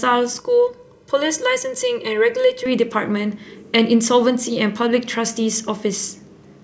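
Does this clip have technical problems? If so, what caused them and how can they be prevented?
Yes. From 0.40 to 2.66 s the speech turns hollow and phasey from channel delay (comb filtering): one channel lags by around 2 ms, and summing to mono cancels evenly spaced frequencies, the first notch near 300 Hz. A spectrogram shows fixed, regularly spaced dark horizontal bands. Prevent it by time-aligning channels and checking mono compatibility before summing.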